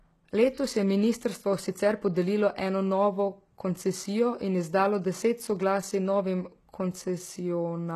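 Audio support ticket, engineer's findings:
Throughout: s sounds gritty, lispy. Nothing above 12.3 kHz. Treble copied up from lower bands. Likely HE-AAC compression. Fits a bitrate near 16 kbps.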